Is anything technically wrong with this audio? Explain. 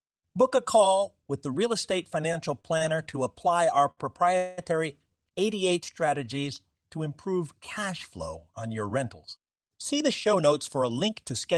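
Yes. Repeated stalls (stutter) from 2.33 to 3.15 s: packets arrived late four times, the jitter buffer emptied, and about 94 ms of held-over sound was filled in, so the speech drags and stutters.

A short stall from a late packet at 3.91 to 3.99 s: the buffer ran dry and the last sound was stretched 64 ms, briefly holding it too long.

A call audio freeze from 4.37 to 4.60 s: the last sound is continued as a fading buzz for about 203 ms, never reaching silence, likely because packets were held up in transit.

A jitter buffer speed-up from 9.93 to 11.53 s: surplus buffered audio was trimmed by removing tiny pitch-period slices, roughly a tenth of a second in total, so the speech runs about 5% faster at unchanged pitch and sounds slightly hurried.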